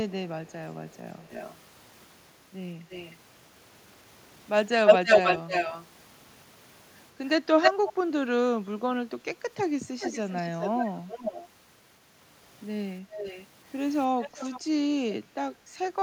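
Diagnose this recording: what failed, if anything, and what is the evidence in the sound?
Echo leak at 0.08–0.12, 0.9–1.56, 2.9–3.17, 4.86–5.87, 7.62–7.93, 10.0–11.48, 13.12–13.46 and 14.22–14.61 s, in call processing. Delayed speech copies trail by 180, 308, then 399 ms, from faint to louder than the speech near 5–8 s. The likely cause is a loudspeaker echo canceller failing to remove its microphone pickup.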